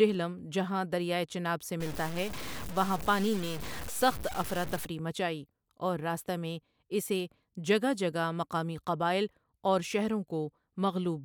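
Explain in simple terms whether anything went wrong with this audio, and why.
Yes. From 1.80 to 4.85 s, after "جہاں دریائے چناب سے" and before "مچائی اور راستہ میں", the speech turns gritty: low bit depth without dither, likely from cutting the sound to 5 bits. Unlike steady hiss, the grain rises and falls with the voice.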